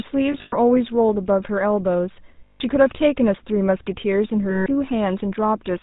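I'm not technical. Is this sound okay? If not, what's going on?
No. Throughout, this speech has the buzzy, gravelly roughness of the GSM full-rate codec, an early mobile-phone format. It rebuilds the voice from a simplified model and drops everything above 4 kHz. The result is a dull, raspy tone rather than the crackling or hissing of a damaged recording.

There are also three spots of lost GSM frames, where bits of the phone signal went missing. From 0.32 to 0.54 s several short gaps are scattered, the longest about a tenth of a second. From 2.44 to 2.61 s and from 4.50 to 4.67 s there are single gaps. In each, the phone repeats the last good sound as a rough metallic ring instead of falling silent or clicking, which is how it differs from a simple dropout.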